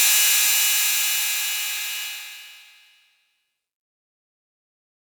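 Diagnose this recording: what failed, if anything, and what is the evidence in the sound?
The fade-out that begins around 2 s shows truncation distortion on a fade, introduced at the gain or sample-format stage. From 2.03 s the tail turns grainy, and from 3.41 to 5.08 s the grit is at its worst. That fits a 12-bit path without dither, which flattens the quiet waveform into a few coarse steps.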